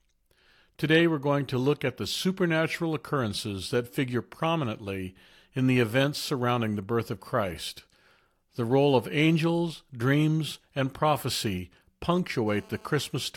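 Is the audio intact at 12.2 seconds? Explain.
No. From 12.16 to 13.02 s a hard, raspy buzz at 216.7 Hz sits about 27 dB below the speech: GSM phone buzz, a nearby 2G phone's data-transfer bursts rectified by the audio circuit.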